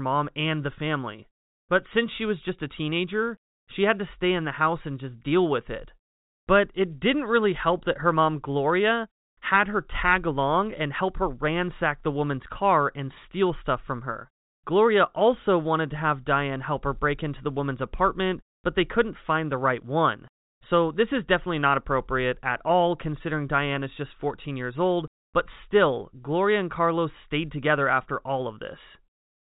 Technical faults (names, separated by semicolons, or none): none